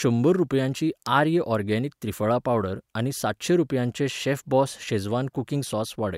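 At 1.06 s a single sharp snap cuts in on top of the speech, lasting only a couple of milliseconds and peaking around -15 dBFS. This is an electrical switching spike, most likely from a nearby switch, motor or static discharge arcing briefly and the audio line picking up that burst of interference. Because it is added rather than replacing anything, the speech carries on underneath, with the tick sitting on its surface.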